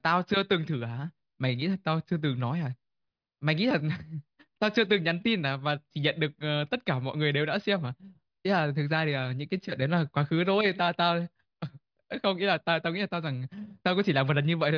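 No technical faults can be heard anywhere in the recording.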